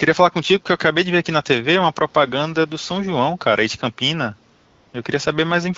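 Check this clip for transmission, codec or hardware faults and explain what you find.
One transmission fault stands out, a burst of AMR comfort noise, heard against wideband HD Voice coding whose light codec colouring fits a mid-rate setting around 12.65 kbit/s. From 4.55 to 4.93 s, about 380 ms, the phone's voice activity detection treated the talker as silent and stopped sending speech frames. The receiver then generated synthetic noise from a rough level and spectral sketch. The genuine background drops out, replaced by a smooth, steady hiss that switches on and then back off.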